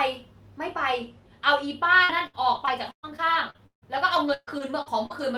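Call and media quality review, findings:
Repeated packet loss (robotic sound), 2.03–5.12 s. A dozen gaps, longest 153 ms. Choppy speech with pieces missing. Network drops; concealment repeats the last audio into the holes.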